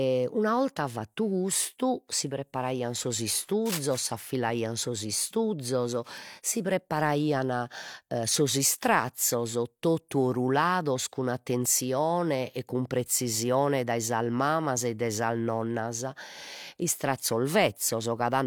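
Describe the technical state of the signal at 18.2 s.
Nothing is wrong with the signal at 18.2 s; the speech there comes through intact with no audible dropout, distortion or other technical fault.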